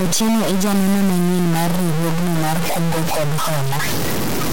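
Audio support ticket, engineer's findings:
Distortion across the whole speech clip, start to end. Pauses filled with hiss instead of silence. Likely a stuck bit in the converter or data line. Wrong values follow the waveform and the sign of quiet samples, so gaps fill with noise.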